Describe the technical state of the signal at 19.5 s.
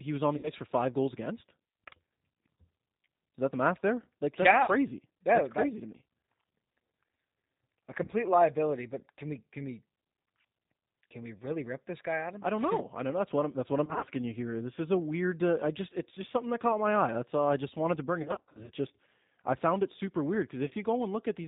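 At 19.5 s the speech carries G.729 codec damage, present throughout the clip. It is rebuilt from a vocal-tract filter, pitch predictor and sparse pulses, consistent with 8 kbit/s, so it sounds rough and synthetic and nothing above 4 kHz survives. A plain low-pass filter would dull the sound without this grainy texture.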